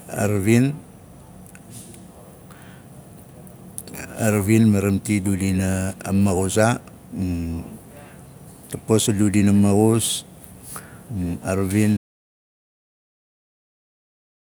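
At 11.97 s, right after "a ravin", the speech cuts off mid-flow into dead silence with no room tone, lasting the final 2.5 seconds. This is an audio dropout to silence, likely a lost input or mute while the recorder kept writing silence.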